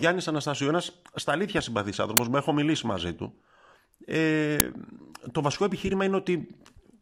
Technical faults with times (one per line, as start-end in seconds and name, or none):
2.17 uninitialised buffer
4.60 uninitialised buffer